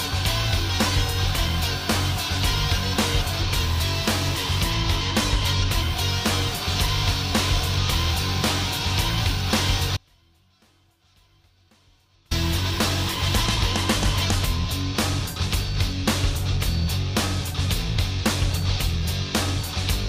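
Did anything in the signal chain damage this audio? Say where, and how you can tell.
Yes. From 9.97 to 12.31 s the sound cuts out abruptly for 2.34 s, an audio dropout to a faint residue, leaving only a weak leak roughly 35 dB down. The likely cause is an intermittent analogue connection with the downstream path still live. Unlike a pause or fade, it switches instantly with no taper.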